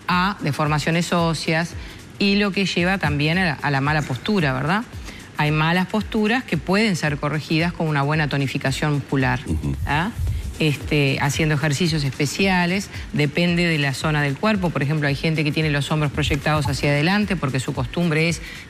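At 16.65 to 16.67 s a corrupt frame is decoded: flipped bits in a single compressed frame were played anyway, misplacing energy across frequencies. It sounds like a brief chirp, squeak, blip or burst of noise peaking near -15 dBFS, seen as a short vertical smear on a spectrogram and a sudden burst in the waveform.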